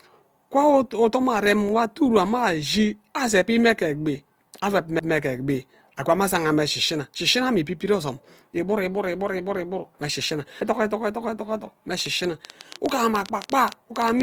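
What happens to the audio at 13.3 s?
At 13.3 s the audio is inside a train of clicks that runs from 12.0 s to the end of the clip at 14.22 s. About 20 pulses of much the same shape tick over the speech at roughly 10.4 per second, spaced unevenly, and stand out about 10 dB above it. The likely source is interference or a faulty connection or power supply. Unlike a lone click or a dropout, it is a sustained, repeating run of similar pops.

The same moment also carries Opus compression, present throughout, likely from an encoding in its CELT music mode at a rate that fits about 24 kbps. The band stays full, reaching up to 20.2 kHz, but bands starved of bits are filled by folding or noise. That damage is plainly audible as a grainy, rough, noisy texture rather than the swirling of MP3's spectral holes.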